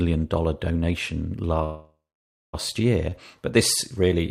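At 1.63 s the speech stalls in a call audio freeze lasting until 2.55 s. The last sound is stretched into a fading buzz or hiss that settles into about 0.56 s of silence, most likely because packets were held up and the jitter buffer ran dry. Speech then resumes where it stopped, with nothing lost but everything after shifted about 0.9 s late. On a spectrogram, smeared, fading bands give way to a blank gap, and the waveform flattens before resuming.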